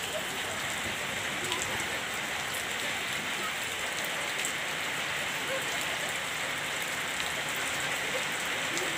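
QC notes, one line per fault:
Nothing to flag on this one, as it all comes through without anything that needs a note.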